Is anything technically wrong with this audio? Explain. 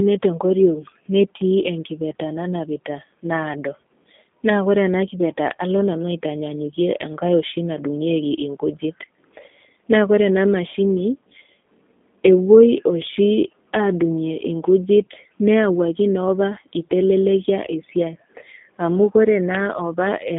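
Yes. A G.729 codec runs through the whole clip. The speech is rebuilt from a vocal tract filter, a pitch predictor and a few coded pulses per short frame, which fits a low-rate 8 kbit/s G.729A stream. The line band runs roughly 200 Hz to 3.5 kHz, with nothing above 3.6 kHz, so the speech sounds thin and muffled. The coding damage is plainly audible as a rough, synthetic edge on the voiced sound.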